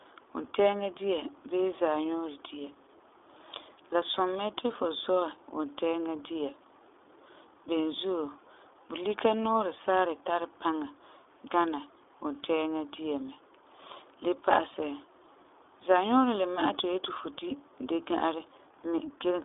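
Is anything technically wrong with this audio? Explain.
Yes. Throughout the speech, the sound carries plainly audible iLBC codec damage. This narrowband coder handles each short frame on its own, and the slightly rough, synthetic texture fits 20 ms frames at a 15.2 kbps mode. Low bass below about 200 Hz is thin, and nothing passes above 3.7 kHz. On a spectrogram, energy stops at a hard ceiling near 3.7 kHz with a weak band under 200 Hz.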